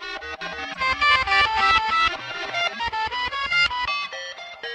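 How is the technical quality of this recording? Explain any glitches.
The recording has two technical faults in its first few seconds.

From 0.41 to 2.73 s there is a doubled audio track. A second, full-band copy of the sound runs about 0.3 s behind the original and at roughly the same level. This is likely from the audio being captured twice, once through a slower path. The result is a distinct, dry echo with no room colour, and it starts and stops abruptly. On a spectrogram, every event appears twice, evenly spaced in time. The waveform shows matching shapes repeated at a fixed offset, with sharp edges at 0.41 and 2.73 s.

From 0.69 to 0.80 s a corrupt frame was decoded. Damaged bits in a short run of compressed frames were played back anyway, so misread gains and codes put energy at the wrong frequencies. The result is a brief glitch peaking at around -20 dBFS. On a spectrogram it shows as a short block of misplaced energy with hard edges at the frame boundaries. 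In the waveform it appears as an abrupt patch of hash that does not follow the surrounding sound.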